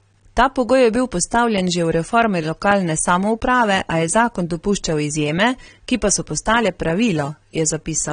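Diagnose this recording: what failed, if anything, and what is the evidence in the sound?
The codec stage failed. Throughout, the speech sounds dull and smeared, with plainly audible coding damage and nothing above 9.7 kHz. The likely cause is AAC compression, AAC-LC at a low bitrate around 32 kbps, which lowers the cut-off and quantises coarsely. A spectrogram would show a flat ceiling at 9.7 kHz.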